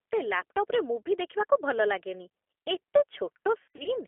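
Speech heard throughout through a G.729 codec, confined to a 300 to 3400 Hz telephone band, with a rough, synthetic quality. Unlike simple band-limiting, this texture points to an 8 kbit/s model-based coder. Between 3.62 and 3.89 s, VoIP packet loss concealed by the speech codec stretches the sound into a fading buzzy tone or coloured noise rather than silent gaps. About 160 ms of audio is missing, scattered over 240 ms, with the longest gap near 60 ms.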